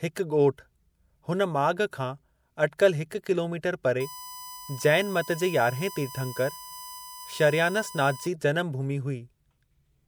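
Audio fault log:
4.00–8.27 s, USB whine: the USB bus draws current in 1 ms frames, and this leaks into the audio through the power or ground path. It lays a steady, fixed-pitch 1 kHz whine under the speech, roughly 15 dB below it.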